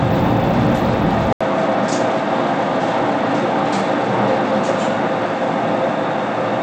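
Bluetooth SBC compression runs from the start. Nothing survives above 17.4 kHz, and a gritty, flickering top points to a starved bit pool at around 96 kbps, likely from this codec.

Input switched to a poorer device at 1.33 s, likely a change of microphone or headset profile. It brings an 80 ms gap, then a band cut off above 10.5 kHz and a faint new noise floor, with no clear change in level through to the end.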